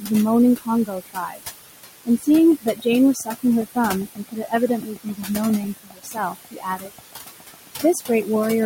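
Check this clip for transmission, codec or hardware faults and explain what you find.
The clip has three faults: noise suppressor artifacts throughout, repeated stretches of speech cut by the noise suppressor, and a train of clicks over most of the clip.

Noise suppressor artifacts run through the whole clip. The suppressor pulls down each frequency band it judges to be steady noise, frame by frame, lowering the room noise by about 18 dB. That background, about 11 dB below the speech, drops away in the gaps and rises back up under the speech.

Speech cut by the noise suppressor occurs at 0.86–1.42 s, 2.05–2.27 s, 2.61–2.86 s, 3.14–3.44 s, 4.06–5.3 s and 5.77–8.28 s. Each time, the suppressor mistakes quieter parts of the speech for noise and turns them down with the background, by up to about 21 dB at the deepest points. Soft consonants and word endings in these stretches sound swallowed or fade out. 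The longest span, from 5.77 s, loses around a second of speech in total.

A train of clicks starts at 2.38 s and continues almost to the end, at 8.64 s. About fifty similar pulses arrive at a steady 7.4 per second, peaking around 10 dB above the speech. They tick audibly over the speech and through the pauses alike. Such a regular, repeated pulse is most likely electrical interference from nearby equipment or a faulty connection or power supply.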